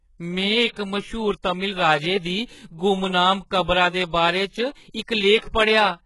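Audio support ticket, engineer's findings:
Sibilants gritty, lispy; treble metallic throughout; nothing above 11.4 kHz. Likely HE-AAC compression, heavy, fitting roughly 12 kbps. Upper band copied from lower bands, not coded. Unlike a plain low-pass, treble stays bright but its harmonics misalign.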